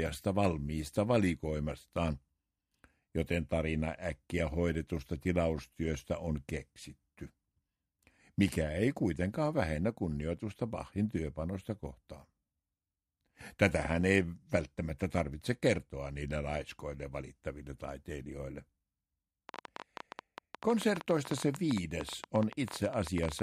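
From 19.49 s to 23.40 s, a train of clicks at an irregular 12.6 per second (around fifty) rises roughly 10 dB above the audio, likely from equipment interference.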